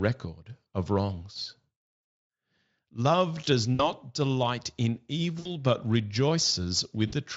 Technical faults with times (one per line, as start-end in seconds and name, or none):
3.75-3.90 VoIP packet loss concealed by the speech codec
5.39-5.54 VoIP packet loss concealed by the speech codec
7.07-7.13 VoIP packet loss concealed by the speech codec